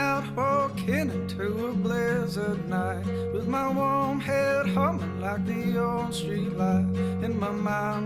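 No technical faults are audible anywhere in the recording.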